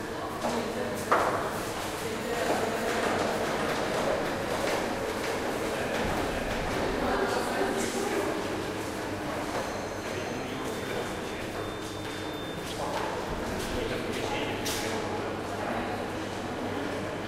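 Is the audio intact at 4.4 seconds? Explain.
No. At 4.4 seconds the audio sits inside a doubled audio track running from 2.33 to 7.17 s. A second, full-band copy trails the original by roughly half a second at about the same loudness, most likely from the signal being captured again through a slower path. It sounds like a dry, exact repeat with no decay or room colour. On a waveform or spectrogram, every event appears twice, half a second apart, and the copy appears and vanishes abruptly at the span edges.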